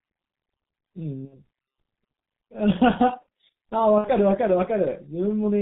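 A speech recording carried over the G.723.1 codec, whose heavy damage fits a rate near 6.3 kbit/s, strips everything above 4 kHz, leaving muffled, hoarse speech with smeared consonants. VoIP packet loss concealed by the speech codec strikes at 1.25–1.38 s and 3.98–4.11 s: each 60 ms gap, matching two lost 30 ms frames, becomes a fading extrapolation, and the speech stays weakened briefly afterward.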